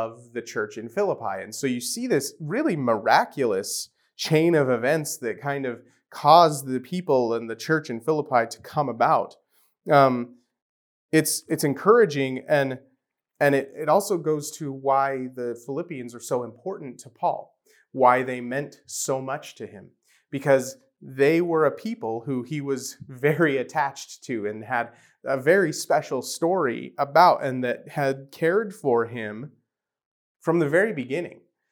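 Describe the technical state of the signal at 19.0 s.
At 19.0 s the signal is intact, with no audible technical fault at that moment.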